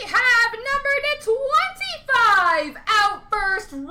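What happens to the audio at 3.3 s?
At 3.3 s the peaks still crackle, in the last moments of a stretch of hard clipping from 2.14 to 3.34 s. The signal exceeds what the stage can pass by about 4 dB, so peaks are sheared flat, adding high harmonics.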